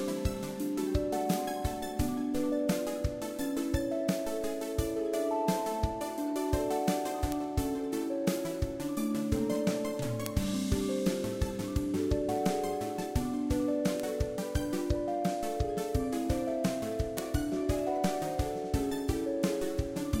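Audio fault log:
1.34, 7.32, 10.26, 14.00 and 17.18 s: bit error spikes. A flipped bit knocks one sample (two at 14.00 s) off by a power of two and back, giving a sharp, broadband tick between about -18 and -6 dBFS.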